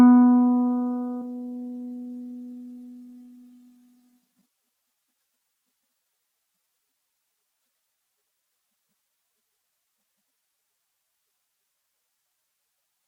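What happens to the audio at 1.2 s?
At 1.21 s the audio skips ahead: about 0.4 s of sound is dropped, likely because the jitter buffer overflowed while later audio was waiting, and playback jumps straight on with no gap. A waveform or spectrogram shows an abrupt seam where mismatched content butts together.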